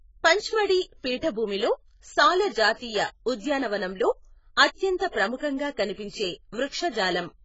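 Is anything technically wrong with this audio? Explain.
Yes. Throughout the speech, the signal was likely squeezed through AAC compression at a very low data rate. The encoder had too few bits for its 1,024 frequency lines per frame, so it discarded everything above 7.6 kHz and coarsely quantised what remained. The damage is heavy, pointing to roughly 16 kbps AAC-LC. The voice sounds dull and smeared, sibilants turn fizzy, and sustained sounds take on a warbling, watery texture.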